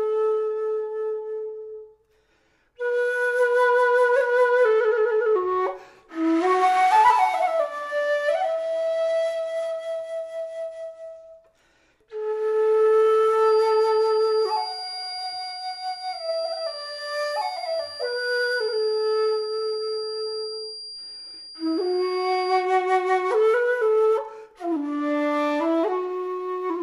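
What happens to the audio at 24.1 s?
Nothing goes wrong at 24.1 s: the audio plays through that moment intact, with no dropout, click, distortion or other fault.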